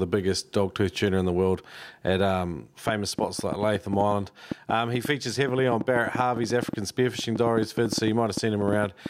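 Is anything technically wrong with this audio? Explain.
Yes. From 2.89 s to 9.07 s a train of clicks runs under the speech, about 7 per second at an uneven pace, roughly forty in all, peaking well above the speech. Likely caused by interference or a faulty connection or power supply, the similar ticks persist into pauses, unlike random crackle.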